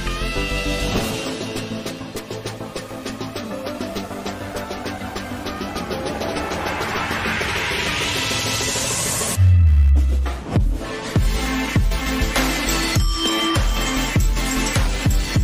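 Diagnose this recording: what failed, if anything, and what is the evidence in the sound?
The analogue wiring stage failed: the audio circuit shares a ground with the computer, and load swings from the processor, graphics card or mouse push that ground around. The result is computer activity noise under the whole recording, a buzzing, chirping texture pulsing at around 70 times per second, sitting roughly 30 dB below the wanted signal. It waxes and wanes with what the machine is doing rather than following the sound itself, which points to ground coupling, not the source.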